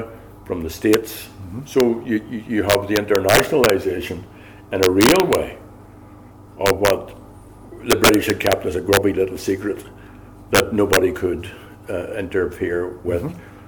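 A gain or summing stage let loud samples exceed the largest integer, and instead of being limited they wrapped to the opposite sign. This integer overflow produces violent cracks, sharper than clipping, at 0.93 s, 1.80 s, 2.70 to 3.70 s, 4.83 to 5.35 s, 6.66 to 6.90 s, 7.91 to 8.53 s, 8.93 to 8.97 s and 10.55 to 10.97 s. They are harshest where peaks overshoot by about 7 dB and 6 dB.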